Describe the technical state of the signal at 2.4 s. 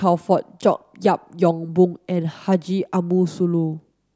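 At 2.4 s the speech signal is intact, with no dropout, distortion, glitch or other fault audible at that moment.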